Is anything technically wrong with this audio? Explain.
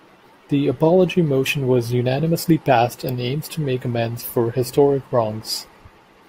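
Yes. From 2.8 s, just after "apology motion was unanimously", to the end of the clip there is a block size mismatch (truncated). One processing stage hands on blocks longer than the next stage takes in, so the tail of every block is discarded. Each cut recurs at 46.9 Hz, which fits blocks of about 1024 samples, and is heard as a steady low buzz over the speech. The speech plays at 1.0 times normal speed, so its pace and pitch are unchanged.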